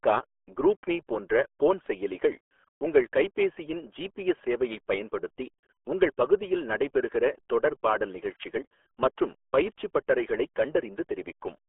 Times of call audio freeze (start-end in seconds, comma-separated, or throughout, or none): none